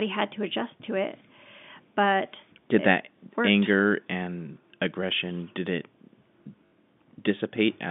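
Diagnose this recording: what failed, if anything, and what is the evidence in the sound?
Network packet loss with last packet repeated: packets went missing and the receiver replayed the last good one. From 6.66 to 6.72 s, a 60 ms gap fitting three 20 ms packets, one speech fragment repeats, buzzing near 50 Hz as a short robotic stutter.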